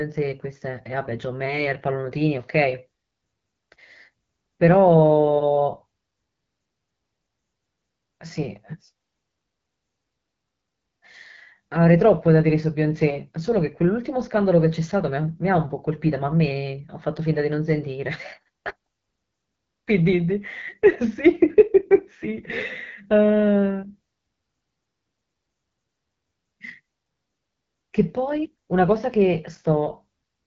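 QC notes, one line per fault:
throughout: AMR wideband (HD Voice) codec. Speech is plainly rough and raspy, which points to one of the codec's lowest bitrate modes. Nothing lies above 7.4 kHz, and the top band is hissy shaped noise rather than real speech detail. Narrowband AMR would stop near 3.4 kHz.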